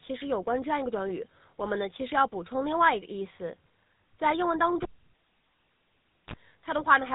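GSM full-rate codec, throughout: the speech has been squeezed through a 13 kbps vocal-tract model driven by sparse regular pulses. Nothing above 4 kHz survives. The damage is plainly audible, a buzzy, gravelly roughness.

GSM bit errors, 6.75 to 6.85 s: corrupted bits reached the decoder, which fits about four damaged frames. Wrong filter, pitch or gain values distort the spectrum and level, so the speech briefly breaks into squawking, popping and gargling.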